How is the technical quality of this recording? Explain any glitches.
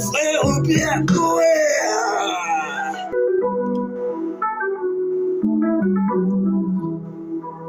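The recording has one clear glitch. At 3.12 to 3.16 s there is a brief blip, and the sound jumps forward. This is likely a stream segment skipped: one chunk failed to load and playback resumed at the next. Unlike a dropout, there is no silent gap; the programme simply continues from a later point.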